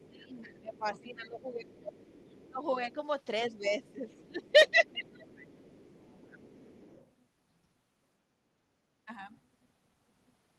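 From 0.0 to 1.13 s, 1.66 to 2.94 s and 3.85 to 7.11 s, the other side's voice leaks through faintly, around 25 dB below the talker. It is likely residual loudspeaker echo, visible as weak, separate harmonic traces on the spectrogram. Overlapping this, speech is suppressed in double talk from 0.11 to 1.93 s, 2.5 to 2.98 s and 3.5 to 5.26 s. The talker's level dips by roughly 10 to 15 dB, likely because the echo canceller turned down both voices, showing as hollowed waveform envelopes.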